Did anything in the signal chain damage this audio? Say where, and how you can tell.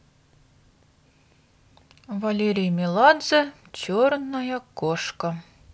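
No, nothing in this speech recording stood out on listening as damage from any stage of the signal chain.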